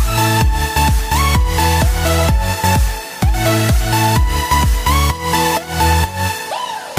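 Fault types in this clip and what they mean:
No fault types are present in this clip.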